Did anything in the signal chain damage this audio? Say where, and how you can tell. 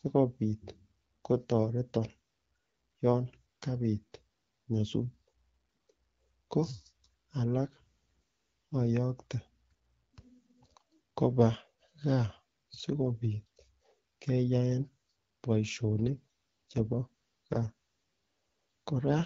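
Yes, an AMR rate drop on the network: from 7.55 to 8.87 s and 15.94 to 19.14 s the speech turns raspy and synthetic with no gap, which fits the link pushing AMR-WB from 12.65 down to 6.6 kbit/s.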